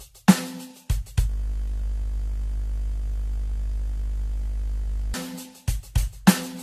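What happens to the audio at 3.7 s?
At 3.7 s the music is stuck in a system hang loop. It runs from 1.30 s to 5.14 s. The computer or driver has frozen, but the sound hardware keeps replaying the same ring buffer. A 20 ms slice of audio repeats exactly, 50 times a second. Because the piece is so short, it doesn't stutter. It merges into a steady 50 Hz buzz that holds until 5.14 s.

Under the buzz, the music is also hollow and swirly, with blurred attacks and nothing above 14 kHz. This is generation loss, and it runs through the whole clip. The likely cause is repeated lossy re-encoding, around seven passes, with the sound pointing to AAC-LC at about 64 kbit/s. Each pass quantises again on a shifted frame grid. The noise and spectral holes pile up, so it sounds worse than that bitrate alone would explain.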